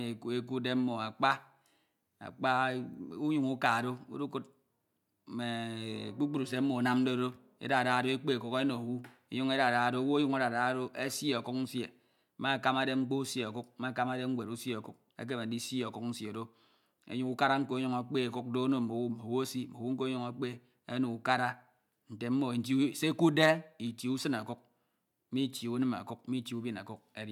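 No technical faults are audible anywhere in the speech; nothing to log.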